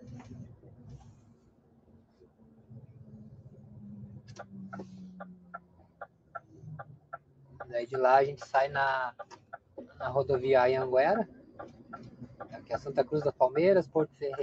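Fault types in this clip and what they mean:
Noise suppressor applied to music or sounds: Throughout the clip the level pumps and flutters, with sustained parts and tails sinking while sharp onsets mostly come through, so the sound feels thinned and unsteady. A speech-tuned noise suppressor was left running and mistakes steady tones, ambience and decay for background noise. It swings its gain by something like 20 dB as it decides moment to moment what to keep, which produces the breathing effect.
Sound cut by the noise suppressor: Five passages dip below their surroundings, at 0.57 to 0.83 s, 1.09 to 2.71 s, 5.36 to 6.52 s, 6.97 to 7.55 s and 9.2 to 9.77 s. The drops reach about 6 dB in the first and about 8 to 9 dB in the rest, and held or fading sound loses body or has its decay cut short. Here the suppressor judged the material to be noise and pulled it down harder than the rest.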